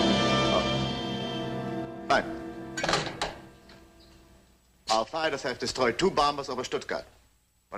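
A stereo channel likely drops out from 1.85 to 2.10 s and again from 5.04 to 5.24 s, so the mono sum falls abruptly by about 6 dB each time.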